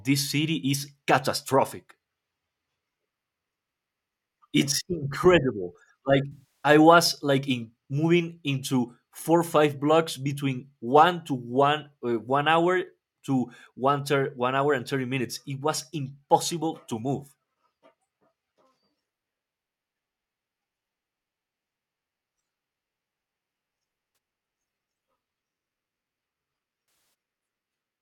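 AAC frame loss with concealment occurs three times in this speech, each time because the decoder lost frames and filled the gap from the last good spectrum. The first gap, from 6.32 to 6.69 s just before "was like in moving", lasts about 0.3 s, which fits roughly fourteen lost frames. A brief one at 24.13 to 24.17 s lasts about 40 ms and is heard as a smeared, noisy or phasey patch where the speech should be. The last, from 26.86 to 27.14 s, runs nearly 0.3 s.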